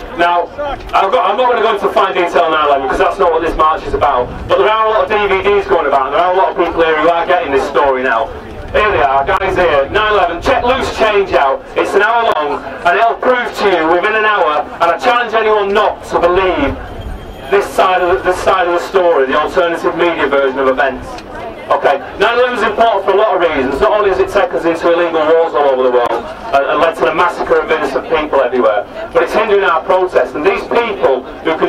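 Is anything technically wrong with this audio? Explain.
Yes. Damaged data in a compressed stream produces brief glitches at 9.37–9.41 s, 12.32–12.36 s and 26.06–26.10 s. Corrupted bytes make the decoder misread frames and lose sync, yielding about 40 ms of disrupted sound, heard as a chirp, squawk, click or short hole.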